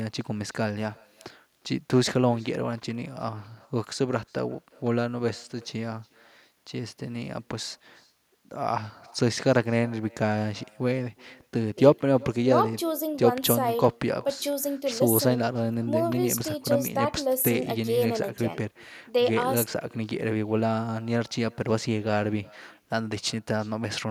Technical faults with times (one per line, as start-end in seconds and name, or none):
0.00-24.10 echo with no canceller